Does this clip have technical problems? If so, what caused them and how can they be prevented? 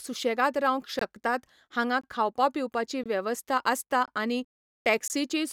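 Yes. A gap between chunks interrupts the speech once per second, at 0.99, 2.01 (just before "खावपा पिवपाची वेवस्था"), 3.04 (just after "हांगा खावपा पिवपाची"), 4.06 and 5.08 s. At each join of the 1.0 s chunks, about 21 ms of silence is inserted. The waveform drops abruptly to silence, and the spectrogram shows thin, hard-edged blank vertical stripes. Trimming codec padding and scheduling each chunk to start exactly when the previous one ends prevents it.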